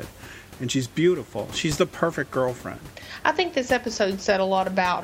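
Nothing's technically wrong with this bit of speech; there's just some room noise sitting about 20 dB below it, and that comes from the space the microphone was in rather than from anything in the system.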